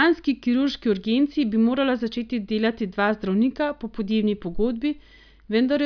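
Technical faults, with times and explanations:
No technical faults can be heard anywhere in this speech recording.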